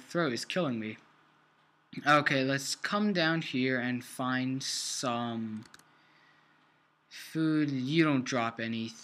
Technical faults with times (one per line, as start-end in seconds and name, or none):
none